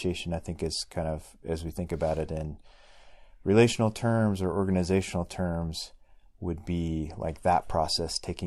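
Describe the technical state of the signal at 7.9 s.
At 7.9 s the speech signal is intact, with no audible fault.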